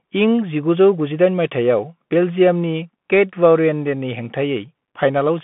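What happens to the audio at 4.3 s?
At 4.3 s the speech is still under the Bluetooth CVSD headset codec, which runs through the whole clip. A one-bit up/down coder with an adaptive step, which fits a 64 kbps stream, leaves nothing above 3.8 kHz, scratchy s sounds and granular hiss. Those last two set it apart from a clean telephone band-limit.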